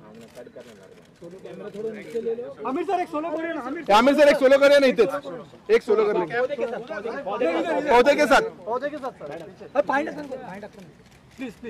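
No technical faults can be heard anywhere in the clip.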